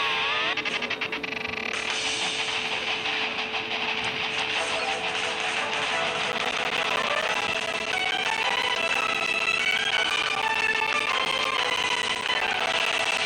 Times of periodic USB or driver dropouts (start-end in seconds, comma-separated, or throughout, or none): 6.32-13.18